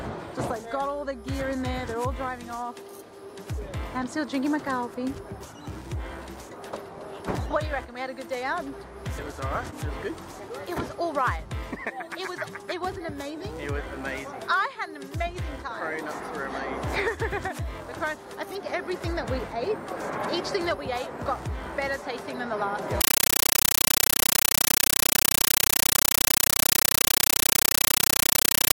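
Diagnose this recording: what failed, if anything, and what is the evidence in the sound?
A compressed stream played as audio fails at the playback stage, on the digital output link. From 23.01 s to the end at 28.76 s, the sound is replaced by very loud, chattering static. The chatter repeats 31.25 times a second. Each burst lasts about 9.3 ms, followed by silence. That pattern fits AC-3 frames, likely a 448 kbps stream, sent as raw samples. The receiver never decoded them, so the coded data itself was heard as noise.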